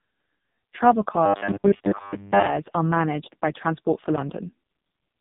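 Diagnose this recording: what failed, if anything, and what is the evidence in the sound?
The whole clip has passed through the AMR narrowband mobile codec, at the codec stage. Nothing reaches above about 3.8 kHz, so the speech sounds boxed in and dull. The damage is heavy. The voice is buzzy and synthetic. That degree of coarseness fits the lowest AMR-NB mode, 4.75 kbps. At that rate the vocal-tract model gets very few pulses per subframe, and the speech loses its natural texture.

From 1.26 s to 2.48 s, just before "are managed by", the speech turns into robotic sound from repeated short buffers. A rigid, metallic buzz at a fixed 100 Hz sits over the speech. The speech still follows its rough contour. The stage is likely the driver or buffer. New audio arrived too slowly, so a 10 ms slice was replayed to fill the gaps. Most of the real audio in that stretch was skipped.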